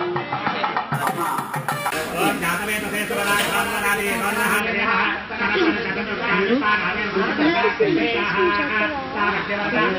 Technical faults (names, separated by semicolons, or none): imaging from sample-and-hold upsampling